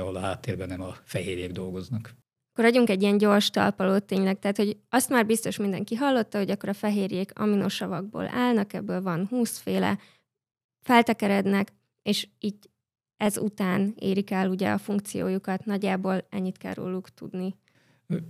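A brief click at 1.61 s in the speech and a slightly longer buzzy tick at 13.26 s are both repeated buffers. Fresh audio did not reach the output in time, so the device replayed its last block of about 5 ms: once at 1.61 s, and twice in a row at 13.26 s. Each replay butts against its neighbour with a hard join. The block is so short that the repeats are heard as a click or brief buzz rather than a stutter, and nothing seems to go missing.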